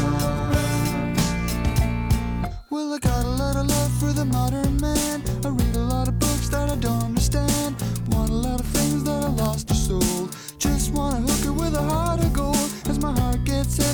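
Sharp, uneven ticks recur about every one and a half seconds from 1.11 s to 13.62 s, around ten in all. These are word clock ticks: an unlocked receiving clock drifting roughly 15 ppm from the sender's drops or repeats one sample at each slip.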